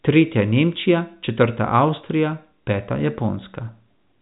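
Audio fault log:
Nothing stood out on listening to this speech, which comes over a G.711 A-law telephone path with nothing above 3.8 kHz.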